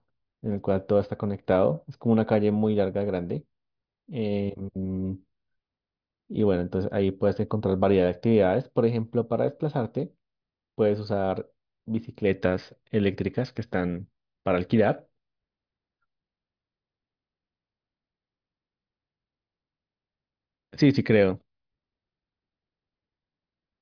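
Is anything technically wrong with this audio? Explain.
No, nothing is technically wrong with this audio.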